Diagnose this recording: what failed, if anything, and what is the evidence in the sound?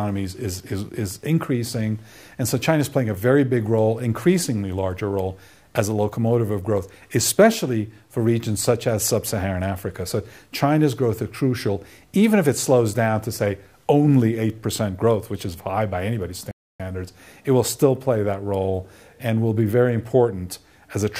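A playback stall: the sound cuts to silence mid-flow at 16.51 s for about 0.28 s, likely the player starving for data, a clean gap rather than crackle.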